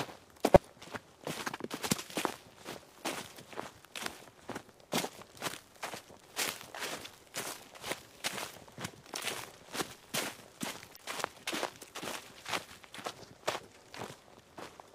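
At 0.54 to 0.57 s, 6.22 s and 10.96 to 11.00 s, damaged data in the compressed stream makes the decoder misread corrupted frames and lose sync, producing brief chirps, squawks, clicks or short holes. A spectrogram shows thin broadband smears, and the waveform shows abrupt discontinuities.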